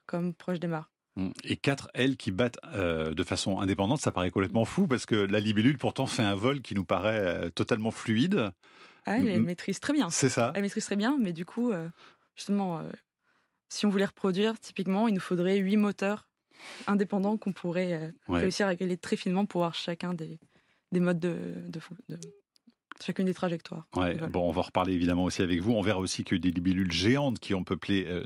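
Speech, with its resampler restarted on every block, which fits a conversion from 24 kHz to 48 kHz done in 100 ms pieces. Each block edge carries its own small error, so regular ticks at 10 Hz run throughout, audible whenever there is signal.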